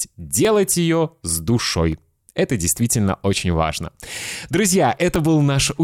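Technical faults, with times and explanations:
0.45 s, 1.92 s, 4.24 s and 5.16 s: dropped samples. Each is a single sharp click in the speech, just before "ее с" at 0.45 s, just after "ее с" at 1.92 s, and just after "действительно очень важно" at 4.24 s. Well under a millisecond of audio is likely missing each time. The waveform jumps straight to a later value. That step makes the click, a thin vertical line across the spectrum. Too little is lost to remove any sound.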